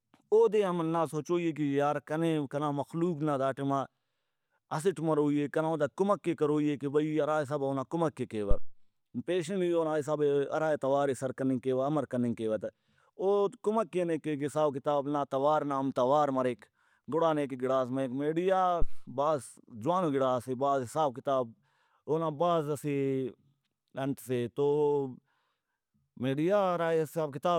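A speech recording carries two deep, low-frequency thumps, one from 8.51 to 8.77 s and another from 18.82 to 19.08 s, each dying away within about 60 ms. These are phantom power thumps: the microphone's supply was switched on or off on a live input, and that sudden DC step passed through the coupling capacitors into the signal path as a brief bass pulse before the capacitors settled.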